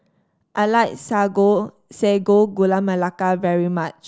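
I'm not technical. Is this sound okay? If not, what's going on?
Yes, no faults found in this speech recording.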